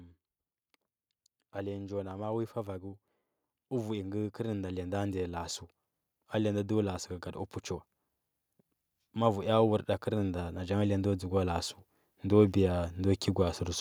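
Automatic gain rising occurs from 3.69 to 5.55 s, lifting the level about 5 dB, and again from 9.13 to 13.63 s, climbing about 9 dB: the gain control judged the speech too quiet and ramped up slowly, so voice and background swell together.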